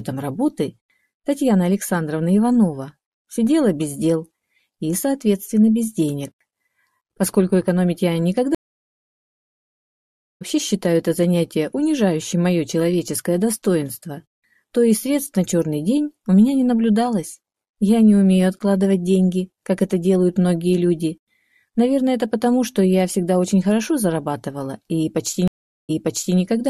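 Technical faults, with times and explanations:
8.55–10.42 s, stream reconnect: the connection dropped, nearly two seconds of silence, then a fresh decoder picks up roughly a second and a half further on, so that stretch is skipped.
25.48–26.38 s, stream reconnect: a shorter 0.41 s gap, but this time the server resends a burst, so playback resumes 0.49 s earlier and you hear that bit repeated.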